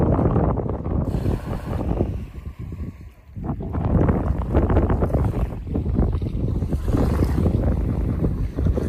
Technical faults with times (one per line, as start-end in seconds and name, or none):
1.55-1.75 overlapping chunks
4.75-4.95 overlapping chunks
7.95-8.15 overlapping chunks